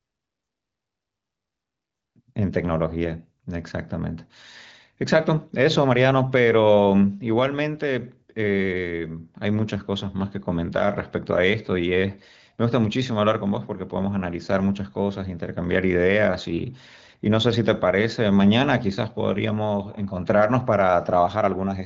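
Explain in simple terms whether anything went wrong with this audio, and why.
Nothing went wrong here: the speech simply carries the slightly trimmed top end you'd expect from an ordinary HD Voice phone call, which doesn't carry anything above about 7.5 kHz, and that's just how that kind of call sounds.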